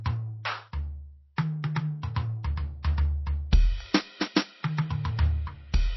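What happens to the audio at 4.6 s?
MP3 compression persists through 4.6 s: the likely cause is a starved encoder, consistent with about 24 kbps, which cuts everything above 5.8 kHz and leaves a watery, swirling music texture.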